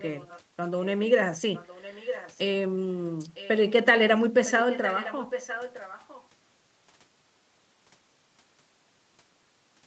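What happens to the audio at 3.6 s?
An echo leak runs from 3.34 to 3.72 s: a faint, delayed copy of the speech surfaces beneath it, trailing the original by nearly a second (about 958 ms) and sitting roughly 20 dB below it. The likely cause is a far end playing the call over a loudspeaker, where the echo canceller failed to strip out everything its microphone caught, so that leftover was sent back down the line.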